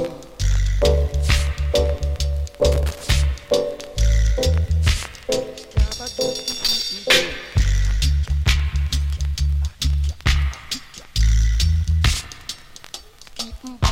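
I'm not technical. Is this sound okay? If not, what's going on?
No. Scratchy, irregular crackling bursts at 2.72 to 3.11 s and 6.50 to 6.76 s are loose connector crackle: a worn or dirty plug contact flickering on and off.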